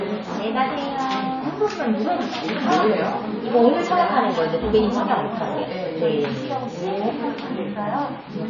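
Throughout, the audio carries plainly audible MP3 compression damage. Nothing is present above 7 kHz, and the remaining detail has a watery, swirling quality with smeared attacks, as weak frequency lines drop in and out between frames. This likely points to an encode at around 24 kbps.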